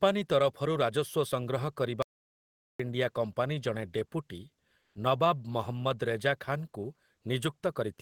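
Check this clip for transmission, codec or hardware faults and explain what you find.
Two faults stand out in this speech clip: a hard dropout to silence and a short stretch of comfort noise.

Audio dropout to silence, 2.02 to 2.80 s: the speech stops abruptly and about 0.77 s of silence follows, with no room tone at all, before the audio resumes just ahead of "ଇଣ୍ଡିଆ କମ୍ପାନୀ ଜଣେ ଡେପୁଟି". The likely cause is that the input feed was briefly lost, from a link failure, disconnection or mute, while the recorder kept writing silence. Whatever was said during that gap is gone.

Comfort noise in place of the background, 4.81 to 4.95 s: right after "ଇଣ୍ଡିଆ କମ୍ପାନୀ ଜଣେ ଡେପୁଟି", for about 140 ms, the natural background sitting roughly 51 dB below the loudest speech gives way to a smooth, detail-free hiss, and the level shifts by about 5 dB. The likely cause is discontinuous transmission in a codec such as Opus. 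Its voice detector judged the pause silent and stopped sending audio, so the receiver filled the pause with synthetic noise roughly matched to the background.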